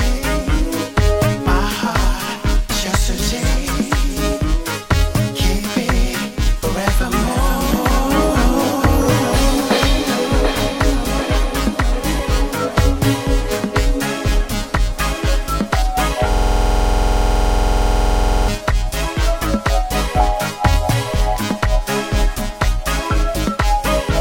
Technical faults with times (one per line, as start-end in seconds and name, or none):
16.33-18.48 system hang loop